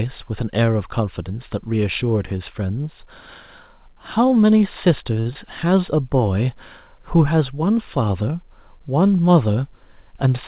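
Around 5.2 s there's a short stall from a late packet: the next chunk of speech hadn't arrived, the jitter buffer ran dry, and the receiver held the last sound for about 53 ms, through to 5.27 s, before carrying on from exactly where it left off. Nothing gets skipped, but that sound hangs on a beat too long with a faint buzzy or dipped quality, and the whole stream sits about 53 ms later afterwards.

Right after, from 5.33 to 5.37 s, comes a short concealed packet loss. About 20 ms of audio never made it to the decoder, so the receiver patched the gap by extending what came before, reusing the pitch if the sound was voiced or shaping noise if it wasn't, then blending back in. You hear it as a tiny smear or wobble, and a quick consonant in there could simply drop out.

Near the end, from 10.05 to 10.32 s, there's a jitter buffer speed-up. The buffer was holding more than it wanted, so the receiver trimmed out pitch-period-sized slivers over and over, around 40 ms in total, which puts playback at about 110% speed. 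The pitch stays put but the speech sounds a bit rushed there. All of it rides on a G.711 A-law call path at 64 kbps, which is why nothing reaches above 4 kHz.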